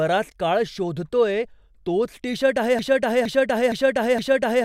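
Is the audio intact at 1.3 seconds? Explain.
Yes, the speech at 1.3 seconds plays through intact, with no audible fault at that moment.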